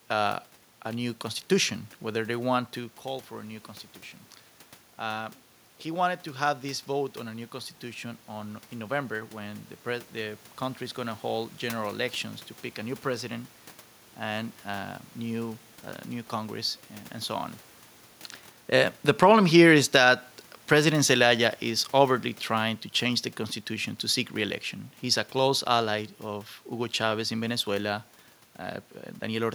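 From 19.0 s to 25.98 s the automatic gain falls. The gain control judged the input too loud, or its background noise too strong. It pulled its level down gradually, by about 7 dB. The speech sinks steadily. The room noise behind it drops by the same amount.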